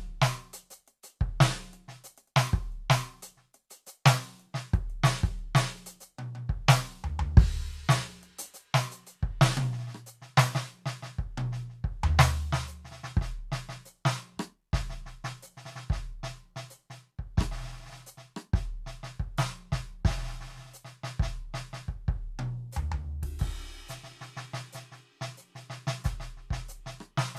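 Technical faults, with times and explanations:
No technical faults can be heard in this music; the signal stays continuous throughout.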